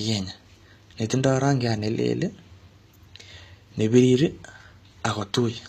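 Throughout the speech, sibilants sound gritty and lispy, with a metallic sheen. Likely HE-AAC compression, its replicated treble pointing to a bitrate near 24 kbps.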